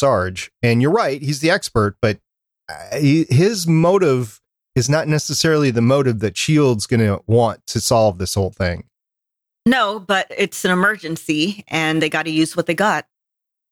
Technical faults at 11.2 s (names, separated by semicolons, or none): none